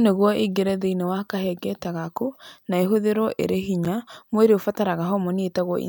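At 1.84 s, just before "gaku na ĩhũthĩrũo ĩrĩ", the speech drops out briefly. It happens again at 3.85 s, right after "gaku na ĩhũthĩrũo ĩrĩ". Each is a gap between chunks of 7 ms. The audio arrived in 2.0-second chunks, and a bit of silence sits at each join.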